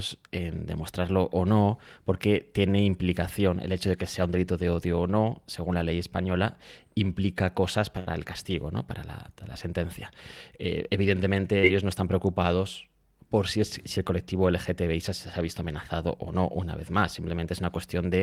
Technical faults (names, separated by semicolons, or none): short stall from a late packet; short concealed packet loss